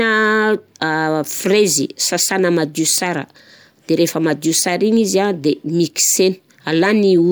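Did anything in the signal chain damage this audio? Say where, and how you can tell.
No, no damage can be heard.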